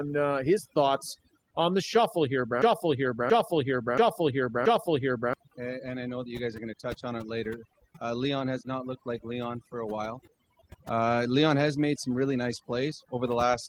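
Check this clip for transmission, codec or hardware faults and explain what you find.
Two faults stand out in this speech clip.

Throughout, the background drops to near silence speckled with twinkling artefacts. That is overdone noise removal: an aggressive suppressor cuts individual frequency bands it judges close to noise, taking quieter parts of the speech along with them.

From 2.62 to 5.33 s, a 0.68 s fragment plays four times in a row, identical each pass, and the speech that belonged there is missing. This broken-record loop is likely a playback, encoder or stream stall that resent its last buffered chunk.

The Opus voice compression is audible only as light codec colouring, with content reaching about 20.4 kHz.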